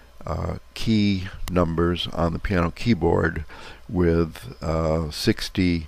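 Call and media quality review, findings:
Electrical switching spike at 1.48 s. A sharp snap riding on top of the sound, peaking at about -5 dBFS. Likely cause is a nearby switch, relay or static discharge arcing briefly, with the interference coupling into the analogue audio line or cabling before conversion.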